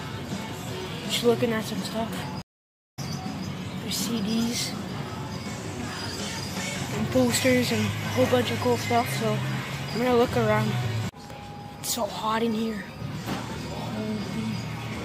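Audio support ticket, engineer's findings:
Stream reconnect, 2.42 to 2.99 s: about half a second of dead air, then the audio picks up roughly half a second further on. Connection dropped, player reconnected and spun up a fresh decoder mid-stream, so that chunk's just gone.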